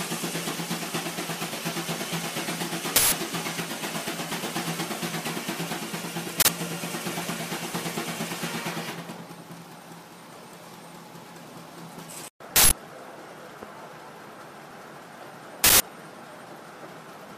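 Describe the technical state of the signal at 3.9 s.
At 3.9 s the signal is intact, with no dropout, distortion, glitch or other technical fault.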